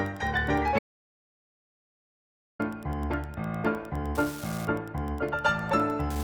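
From the start there's Wi-Fi interference: a nearby radio's beacon, every 102.4 ms, gets rectified into the circuit, giving a faint ticking roughly 25 dB under the sound. At 0.79 s it cuts to total silence until 2.59 s, an audio dropout to silence of about 1.8 s, likely a lost input while silence kept recording.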